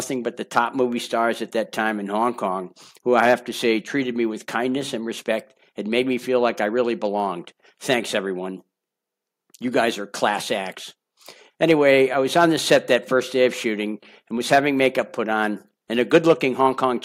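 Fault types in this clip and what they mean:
Nothing here calls for a fault line, since the audio comes across without any dropouts, clicks, distortion or other glitches to speak of.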